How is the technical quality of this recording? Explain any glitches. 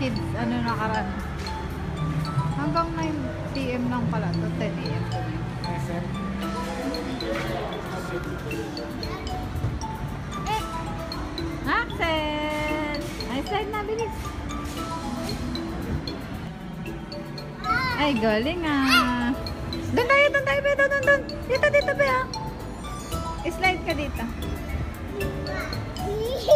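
There's one glitch worth flagging, a stretch of channel delay with comb filtering from about 16.47 to 17.70 s. For that second or so, one channel runs late by roughly 5 ms relative to the other, and when the two get summed to mono, the shared content cancels at evenly spaced frequencies, starting somewhere near 100 Hz and repeating up the spectrum. You hear it as a sudden hollow, phasey sound, like the sound briefly went through a tube.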